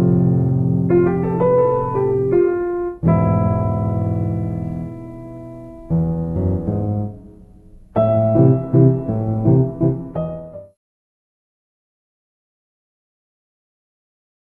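No technical faults are present in the signal, and the smooth fade-out from around 9.5 s to silence at 10.77 s is an ordinary edited ending without any click or hard edge.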